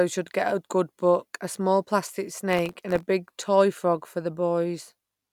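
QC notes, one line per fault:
2.50–3.08 s, processor overload crackle: gritty tearing over the speech as dozens of buffers under a millisecond each miss their deadline and drop out to hard-edged silence.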